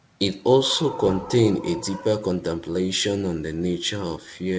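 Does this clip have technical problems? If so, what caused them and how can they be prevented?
No, nothing stood out on listening to this speech, which comes through a G.722 call path that carries nothing above 8 kHz.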